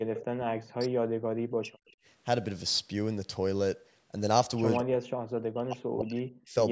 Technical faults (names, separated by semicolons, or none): speech suppressed in double talk; echo leak